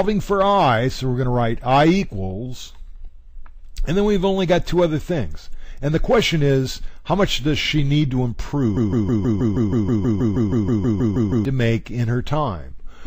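A broken-record loop runs from 8.77 s to 11.45 s. A fragment about 0.16 s long repeats exactly, back to back, 17 times, giving a rapid stuttering pulse at roughly six repeats per second in place of the audio that belonged in that span, which is lost. The likely cause is a stall in the player, encoder or stream that kept re-sending the last buffered fragment until the data flow resumed.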